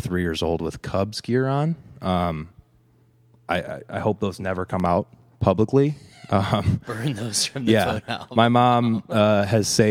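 At 4.80 to 4.88 s, a loud pop: two sharp thumps, a few decibels above the speech, likely from an electrical glitch, showing as waveform spikes and vertical broadband spectrogram stripes.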